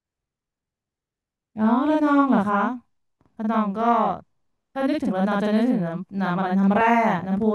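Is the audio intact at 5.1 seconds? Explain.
No. At 5.1 seconds the speech carries channel delay (doubling), present across the whole clip rather than only at that moment. One channel arrives about 46 ms behind the other, which fits a 2048-sample buffer, and when the two are folded to mono the late copy stays distinct instead of blending. Every syllable is followed by an equally loud duplicate, heard as a tight doubling or a single slap echo trailing each onset.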